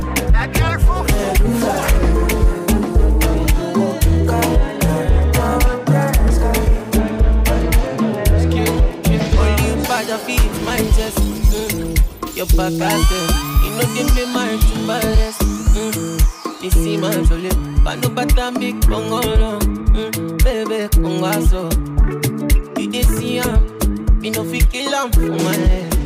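At 11.25 s the playback buffer ran dry and the converter held its last output value instead of receiving fresh samples, an underrun with held sample. For about 5 ms the waveform freezes at a fixed level, so the sound simply stops, almost without a click at the start. Because a few milliseconds of live audio were skipped rather than resumed, the signal re-enters at a different point.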